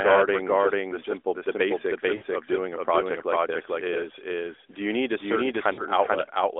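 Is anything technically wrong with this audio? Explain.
Yes, there are two faults.

A doubled audio track runs through the whole clip: a second, full-band copy of the speech trails the original by roughly 0.4 s at about the same level. The likely cause is the signal being captured twice, once through a slower path. Unlike a room echo or reverb, the copy has no decaying tail, no added room colour, and no further repeats. It is a single clean duplicate, so the speech sounds like two identical talkers out of step.

Lost AMR speech frames occur twice. The first is from 2.16 to 2.24 s, about 60 ms, between "the simple the basics" and "of doing a project". The second is from 5.74 to 5.82 s, about 40 ms. When a frame is corrupted, the decoder keeps reusing the last good pitch and vocal-tract settings while lowering the gain. The lengths fit runs of three and two 20 ms frames. Each gap is heard as a brief smeared, warbling stretch that sags in level, rather than a clean silent dropout, and the speech returns slightly weak for a moment. 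Both events sit within the narrowband mobile sound of the 300 Hz to 3.6 kHz line.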